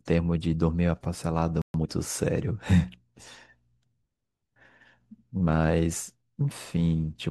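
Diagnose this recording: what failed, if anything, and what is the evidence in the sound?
The speech falls silent from 1.62 to 1.74 s and then resumes. This is a playback stall of about 0.13 s, likely from the player's buffer running dry or its thread being blocked.

From 1.74 to 1.86 s the speech runs at twice normal speed with its pitch unchanged. This is time-compressed catch-up in the player, which cuts and cross-fades short slices to clear its backlog. A clock or resampling error would raise the pitch as well.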